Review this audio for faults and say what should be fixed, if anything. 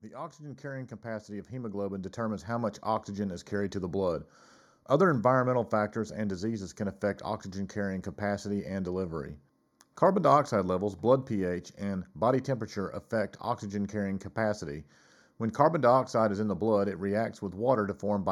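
Channel delay (comb filtering) runs through the whole clip. One channel lags the other by about a fifth of a millisecond, and summing them to mono cancels shared content near 3 kHz and at evenly spaced frequencies above it. The speech sounds hollow and phasey. A spectrogram shows fixed dark horizontal bands. Align the channels before the mono fold-down, or take a single channel.

Automatic gain rising occurs from 0.12 to 3.9 s. The gain control judged the input too quiet and raised it by about 13 dB, so speech and background swell together. The waveform envelope widens steadily across those seconds, and the noise floor rises with it. Disable automatic gain or set a fixed input level before recording.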